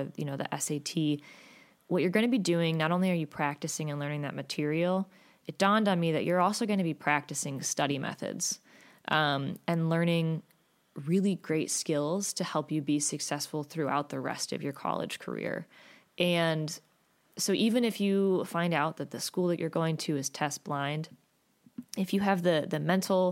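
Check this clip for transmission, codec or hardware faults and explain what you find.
No faults can be heard anywhere in the speech. There is nothing in it to point to or explain.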